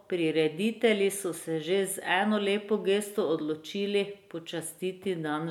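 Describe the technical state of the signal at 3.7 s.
At 3.7 s the speech signal is intact, with no dropout, clipping, distortion or other fault audible at that point.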